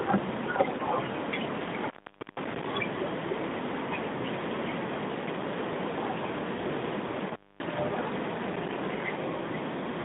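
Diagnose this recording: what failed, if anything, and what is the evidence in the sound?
From 0.72 to 0.82 s the speech turns hoarse and gargly while keeping roughly its pitch and loudness. This is AMR bit errors at the network stage. On a weak radio link, a few percent of the less protected bits in the 12.2 kbps AMR-NB frames arrived flipped, but the checksum on the key bits still passed. The decoder therefore placed its excitation pulses wrongly and used slightly wrong pitch, gain and spectral values. The 100 ms span fits about five 20 ms frames.

Between 1.55 and 2.72 s the sound drops out with crackle at both edges. For roughly 0.47 s only faint hiss remains. This is an intermittent contact in the analogue wiring: a loose plug or cable conductor briefly opened the signal path. The crackle comes from the contact making and breaking, and the hiss is what the input picks up while the line is disconnected. 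The band-limited 150 Hz to 3.7 kHz line sound on either side frames the gap.

From 8.36 to 9.19 s a gritty, tearing crackle rides on the speech and then stops. This is processor overload crackle at the driver and buffer stage. The processor repeatedly failed to fill its small audio buffers in time, and each miss left a short hard-edged silent gap. The texture fits buffers of about 3 ms, with about 50 deadlines missed over the stretch until the load eased.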